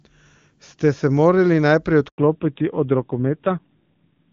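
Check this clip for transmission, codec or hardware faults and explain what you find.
Two faults are audible, both around 2.1 s, and they follow one another directly: a handover gap and then a fallback to narrowband.

From 2.08 to 2.18 s the speech fades out within a few tens of milliseconds and leaves about 100 ms of silence before the sound returns. This is a handover gap. While the call was being passed from one network link to another, no speech frames got through, so whatever was spoken in that tenth of a second is simply missing rather than garbled.

From 2.18 s to the end, the speech sounds duller, boxier and rougher than before. This is a fallback to narrowband. Up to 2.08 s the call was running on the AMR wideband (HD Voice) codec, with clear, full-bodied speech whose clean character fits a rate around 23.85 kbit/s. After the switch, nothing above 4 kHz remains, so sibilants and breathy detail lose their edge. 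The thinner, grainier texture fits the older AMR narrowband codec at around 7.4 kbit/s.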